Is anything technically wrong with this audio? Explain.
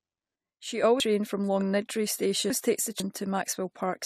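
Yes, two faults. From 0.36 to 0.83 s, the speech and background noise suddenly drop together by about 6 dB, then jump back. This sudden gain jump is likely a gain change applied without a ramp. Between 1.0 and 3.0 s, the speech sounds jumbled. Chunks out of order: a 500 ms chunk plays three chunks late, after the ones that should follow it.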